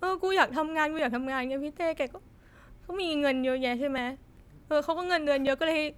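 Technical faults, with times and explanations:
0.99 to 5.47 s, clock drift buffer slips: about four short clicks recur every 1.5 s while the speech plays, likely because two devices run on separate clocks that disagree by several hundred parts per million, so the buffer between them slowly drifts until a block of a few dozen samples is dropped or repeated. On a waveform each slip is a sudden step or discontinuity; on a spectrogram it is a thin vertical broadband line, evenly spaced.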